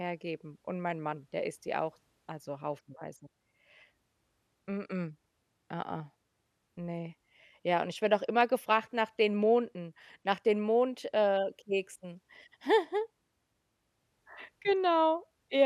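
Brief burbling noise cut across the speech from 1.55 to 1.68 s, just before "die auch also haufenweise", and again at 14.69 to 14.76 s. This is DAB burbling: weak reception let bit errors slip past error correction, corrupting MP2 audio data so individual sub-bands picked up short blips of noise, across 6 and 3 frames respectively.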